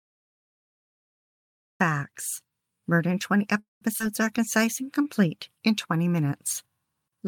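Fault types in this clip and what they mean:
Cut-off start: the capture began late, so the speech is already under way when sound appears at 1.80 s, rising straight out of digital silence with no attack or fade. On a waveform the first 1.8 s are a flat silent line, then speech appears abruptly. A spectrogram shows a blank region ending in a hard vertical edge where every frequency band switches on at once.
Call audio freeze: at 3.59 s the speech stops advancing for about 0.22 s. The receiver fills the wait by extending the last sound, which decays into roughly 150 ms of silence before the speech resumes at 3.82 s with nothing lost. The likely cause is packets held up in transit that emptied the jitter buffer. A spectrogram shows the final frame smeared horizontally and fading to a dark gap, and the waveform tapers to flatness.
Skip ahead: at about 3.99 s the speech jumps forward, losing roughly 70 ms. 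The two sides are spliced almost directly with only a 7 ms join, so there is a tiny jolt in timing rather than a pause. On the waveform this is an abrupt change in cycle shape with no gap. On a spectrogram the harmonic contours break and restart at different positions, showing a discontinuity across bands.
Jitter buffer slow-down: from 4.37 to 5.05 s the receiver repeated individual pitch periods to rebuild its reserve, adding 58 ms and running the speech at 93% speed with unchanged pitch. Sounds are slightly drawn out. The waveform shows runs of near-identical repeated cycles. On a spectrogram the harmonic lines stay at the same frequencies but stretch horizontally.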